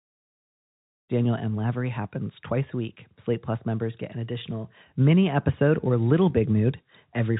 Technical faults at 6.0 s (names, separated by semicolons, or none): none